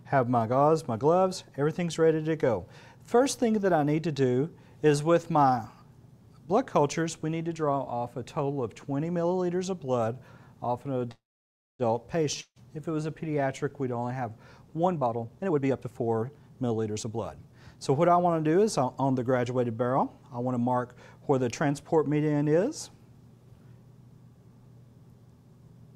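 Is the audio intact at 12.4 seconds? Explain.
No. From 12.41 to 12.59 s there is a long network dropout: the stream likely stopped delivering packets, and about 160 ms of the original audio never arrives. The receiver papers over the gap by extending the last sound for roughly 150 ms as a fading buzz, which dies into about 70 ms of silence. The audio then resumes further on, with that stretch simply gone and the timeline shifted by about 14 ms.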